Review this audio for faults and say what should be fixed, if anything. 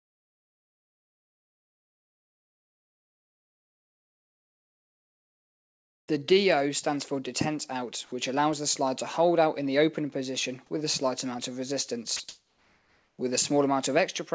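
From 0.00 to 6.08 s, and again from 12.29 to 13.19 s, there is comfort noise in place of the background. The real room sound is likely swapped for steady, featureless synthetic noise that the receiver generates while the sender transmits nothing. In the first stretch the level drops by about 38 dB under a background already about 64 dB below the loudest sound. In the second stretch it rises by about 6 dB over a background about 41 dB down. On a spectrogram these stretches show as flat, smooth bands with no texture, and the waveform holds an even, uniform floor. Turning off discontinuous transmission, or using a comfort-noise generator that matches the background's level and spectrum more closely, would prevent this.

From 6.09 to 6.35 s, a jitter buffer slow-down stretches the audio to 87% speed. The receiver repeats pitch periods to rebuild its reserve, adding 42 ms, so sounds drag at unchanged pitch. 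A spectrogram shows harmonics smeared longer in time, and the waveform shows repeated, near-identical cycles. Steadier network delivery, or a jitter buffer with more headroom, would prevent this.

From 6.61 to 6.97 s, a jitter buffer speed-up pushes the audio to 110% speed. Short pitch-period pieces totalling about 50 ms are cut to drain excess delay, so the passage sounds hurried at the same pitch. On a spectrogram, features look compressed in time, and the waveform shows slightly truncated cycle sequences. Smoothing packet arrival, or giving the buffer gentler delay targets, would prevent this.

From 12.17 to 12.20 s, 30 ms of sound is dropped by the voice detector, which likely classed it as background and stopped sending. Steady noise briefly replaces the real signal. A spectrogram shows a short gap filled with flat noise, and the waveform's envelope shows a brief notch. A less aggressive voice detector with a longer hangover would prevent this.

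Throughout the clip, the G.722 path leaves nothing above 8 kHz, which shows as an empty band above that line on a spectrogram.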